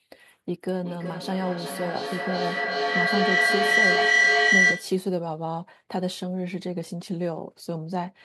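From 0.7 to 5.07 s a feedback howl near 2 kHz swells to about 8 dB above the speech, pulsing roughly every 400 ms, growing rather than fading like echo.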